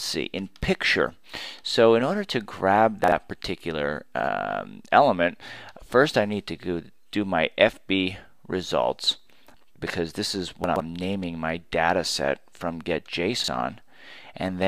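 Chunks out of order occur at 3.04 to 3.12, 4.2 to 4.28, 10.64 to 10.8 and 13.4 to 13.48 seconds. A 40 ms chunk plays after the one that should follow it. Each spot sounds briefly jumbled. The span at 10.64 is longer, which fits a chunk arriving three places late.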